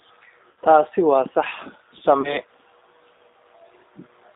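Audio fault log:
throughout: G.729 codec; spectrogram shows nothing above 3.7 kHz and nothing below 300 Hz, with smeared pulse-built harmonics giving a rough, slightly synthetic speech timbre.
0.51–0.57 s and 2.21–2.38 s: VoIP packet loss concealed by the speech codec; 60 ms and 30 ms gaps filled with decaying extrapolated sound, waveform shrinking.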